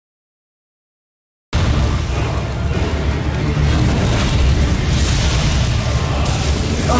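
For the first 1.53 s there is dead digital silence, and then the sound jumps in abruptly, mid-event, with no attack or fade-in. This is a cut-off start: capture began late and caught the sound already underway. The call path's G.722 coding keeps the band below 8 kHz.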